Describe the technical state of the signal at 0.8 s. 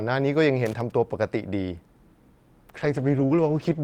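At 0.8 s the speech is inside a burst of loose connector crackle running from 0.66 to 0.92 s. A worn contact keeps making and breaking, chopping the signal into irregular scratchy pops. The waveform shows jagged dropouts and spikes, and the spectrogram shows broadband vertical streaks.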